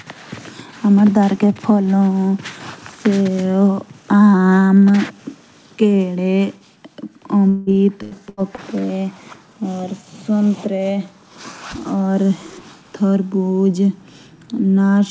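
Between 7.49 and 8.60 s of this speech recording, packets were lost or arrived late repeatedly: repeated packet loss with a robotic sound. Four separate holes open in quick succession, the longest about 177 ms. The receiver bridges each one by stretching the last sound it had, so about a third of that stretch is patched rather than real audio. The result is choppy, robotic speech with pieces missing. Throughout the clip, nothing reaches above 8 kHz, which fits a wideband call codec such as G.722.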